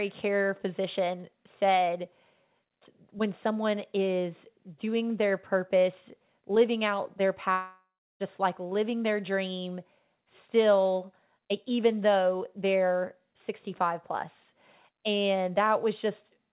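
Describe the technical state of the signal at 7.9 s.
At 7.9 s the signal sits inside a likely long network dropout running from 7.52 to 8.23 s, after "purpose living out their". About 0.68 s of audio never arrived. The receiver stretched the last sound into a fading buzz or hiss, leaving silence before "like living their dream" resumes.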